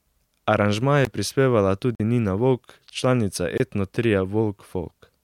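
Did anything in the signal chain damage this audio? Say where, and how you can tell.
Yes, at the driver or buffer stage: blocks of digital silence at 1.05 s, 1.95–2.00 s (46 ms) and 3.58–3.60 s (23 ms, before "etno tria"). The lengths fit unfilled 2048- and 1024-sample buffers. The waveform drops flat to silence, and the spectrogram shows black gaps.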